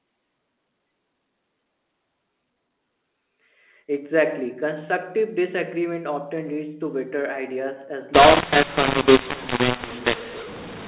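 A speech clip over a telephone line whose audio turns harsh and gritty from 8.14 s, right after "to better ideas as", through to the end. The level balance is scrambled: some parts jump out too loud, others sink, and the gaps fill with hiss instead of silence. This is a mu-law and A-law mixup. The G.711 A-law samples are being decoded as mu-law, so every 8-bit code is mapped to the wrong amplitude and the quietest codes land well above zero.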